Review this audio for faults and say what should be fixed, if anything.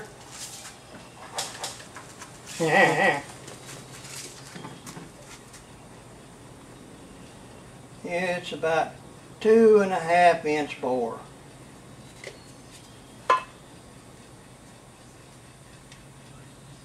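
From 1.42 s to 4.10 s a doubled audio track appears: a full-band copy roughly 300 ms late and about 5 dB quieter, likely a second capture path. Unlike an echo, it repeats once, without decay or room colour, and switches abruptly. Route each source once and mute duplicate monitoring paths.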